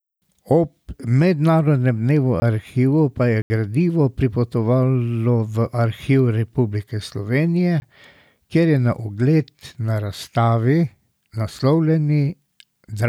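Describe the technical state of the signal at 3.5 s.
A block of digital silence runs from 3.42 to 3.50 s, ending right at the moment asked about. For 80 ms the speech drops to silence, the kind of gap left when the output buffer was not filled in time. The signal cuts out and returns with no fade, and the 80 ms span is heard as a short hole between "arhivov pa je" and "gradivo pripotovalo v".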